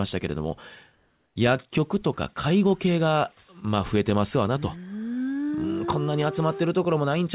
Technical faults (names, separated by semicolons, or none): comfort noise in place of the background